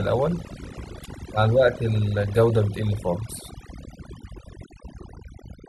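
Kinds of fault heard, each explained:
Overdone noise removal: heavy noise reduction cuts frequency bands near its noise estimate, quiet speech detail included, so pauses drop to near silence with twinkling specks; a spectrogram shows scattered dots on a blank floor and patchy harmonics.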